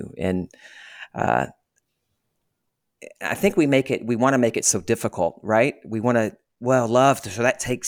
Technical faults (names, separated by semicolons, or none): none